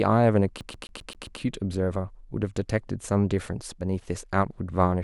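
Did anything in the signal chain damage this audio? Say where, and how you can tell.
Yes: at playback, a CD stuck on one turn repeats a 132 ms slice six times from 0.61 to 1.40 s, showing identical spectrogram blocks separated by brief silent gaps.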